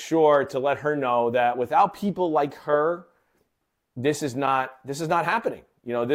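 Nothing in this speech recording stands out as a technical fault, so there's really nothing to flag here.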